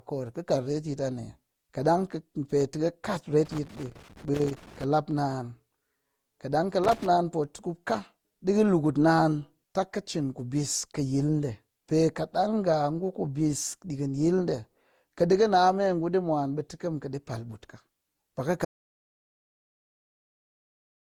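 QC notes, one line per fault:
Throughout: generation loss, likely from about seven repeated Opus passes at 64 kbit/s; swirly, hollow speech, smeared attacks, content reaching 20.1 kHz.
3.45–4.84 s and 6.84–7.06 s: loose connector crackle after "pe tɨ kɨ kat" and "kaɗang kɨ"; contact chopping the signal gives irregular scratchy bursts, spiky waveform, vertical broadband streaks.
18.65 s to end: audio dropout to silence; sound cuts off mid-flow with no room tone, likely a lost input, flat waveform and blank spectrogram.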